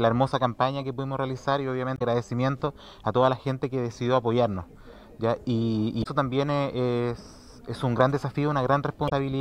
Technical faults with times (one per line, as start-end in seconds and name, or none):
1.95-2.02 damaged data in a compressed stream
6.00-6.06 damaged data in a compressed stream
9.05-9.12 damaged data in a compressed stream